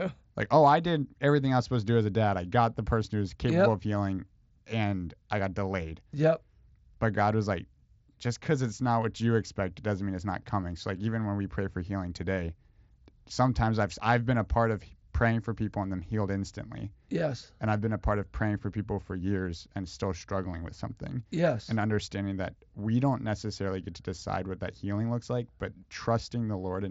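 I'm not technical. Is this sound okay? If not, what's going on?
Yes, nothing stood out as wrong when listening to this speech, which sounds like it came through a Bluetooth headset link.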